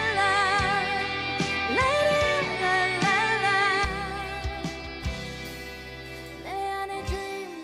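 From 0.0 to 3.85 s the audio is band-limited, with nothing above 11.4 kHz, a faint noise floor far below the signal and a level step of roughly 5 dB. It then clears abruptly with no gap, most likely an input switched to a poorer device.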